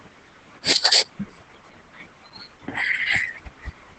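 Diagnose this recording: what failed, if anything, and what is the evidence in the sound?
Codec stage: Opus voice compression across the whole clip makes the speech plainly hoarse and slightly robotic. This fits SILK at around 12 kbps. The codec ran in 20 ms frames.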